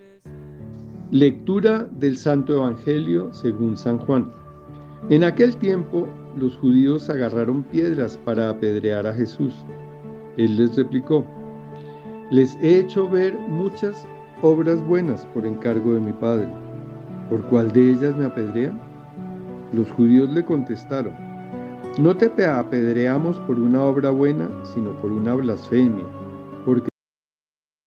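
At 26.89 s the sound stops abruptly, mid-event, and the remaining second or so to the end of the file is digital silence. This is a cut-off end: the final buffers of the signal were never written out or played back, so the waveform is truncated rather than allowed to finish. There is no decay or fade. Level falls from active sound to silence instantly, and the last moment is left audibly incomplete.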